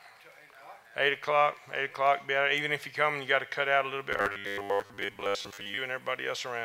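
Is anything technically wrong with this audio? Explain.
Yes. From 4.12 to 5.78 s the sound turns into a rigid, metallic buzz at 100 Hz that only loosely tracks the original. This is robotic sound from repeated short buffers, likely because new audio arrived too seldom, so roughly 10 ms segments were looped for most of that stretch.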